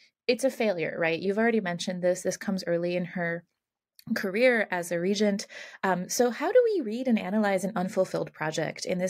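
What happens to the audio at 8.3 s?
Nothing goes wrong at 8.3 s; the speech carries on intact through that moment with no dropout, click or distortion.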